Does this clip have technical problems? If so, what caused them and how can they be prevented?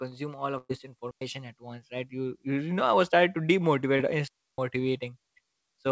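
Yes. The speech passes through a call path whose audio stops at 8 kHz, consistent with a G.722 wideband codec, and it carries four faults of three kinds.

Burst of packet loss, 0.58 to 0.71 s: about 120 ms of audio never arrived in time. The receiver spent roughly 113 ms continuing the last sound and letting it decay, then about 30 ms fell to silence before playback resumed further along, so the section in between is simply gone and the fill sounds like a fading held tone or hiss. Preventing it means giving the call more network headroom, a deeper adaptive jitter buffer, or forward error correction.

Digital wireless dropout, 1.11 to 1.21 s and 4.28 to 4.58 s: the wireless receiver lost too much data and muted with a very fast fade, leaving clean holes of near silence about 105 ms and 307 ms long. No noise burst marks either edge, which separates this from an analogue dropout. Preventing it means keeping line of sight between transmitter and receiver, shortening the distance, and choosing a channel clear of interference.

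Short concealed packet loss, 3.97 to 4.01 s: about 20 ms of the call missed the decoder. Roughly 19 ms of that was filled by extending the preceding sound and blending back into the real signal, heard as a brief smear or wobble where a short consonant could be lost. Preventing it comes down to the same network measures, with priority given to the audio traffic.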